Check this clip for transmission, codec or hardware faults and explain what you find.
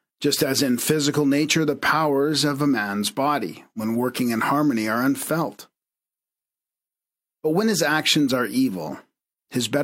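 Checking the clip turns up no faults to explain.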